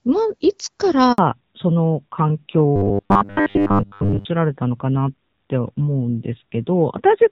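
At 1.12 s the speech cuts out for 60 ms in a handover gap, as the call switches networks and no frames arrive. Unlike a codec dropout, the sound fades quickly into true silence, then resumes on the new link with a different tone.

From 1.18 s to the end comes a fallback to narrowband. The fairly clean wideband sound of the opening, with only light HD Voice codec texture, gives way to a band with nothing above 4 kHz, consistent with a drop from AMR-WB to AMR-NB near 7.4 kbit/s. The voice sounds duller and rougher, like an older phone line, and the tone does not come back.

Between 2.76 and 4.26 s the speech turns into a rigid, metallic buzz with a fixed pitch of 100 Hz. This is robotic sound from repeated short buffers. The likely cause is the player looping the last 10 ms of audio while most of the real signal is skipped. It differs from a gap or a fade because the sound keeps going, still roughly following the speech.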